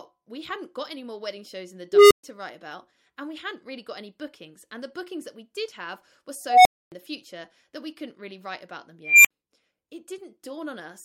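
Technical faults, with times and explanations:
1.93–2.24 s, unstable filter: a tone near 400 Hz swells over 0.18 s into a clipped squeal, then the audio drops out for 0.13 s. A recursive filter's feedback is amplifying instead of decaying, so its output runs away until it overflows and resets.
6.46–6.92 s, unstable filter: the same runaway, pitched near 700 Hz, building over 0.19 s, followed by a 0.27 s silence.
9.04–9.31 s, unstable filter: a shriller squeal near 2 kHz, building over 0.21 s, with a 0.06 s gap.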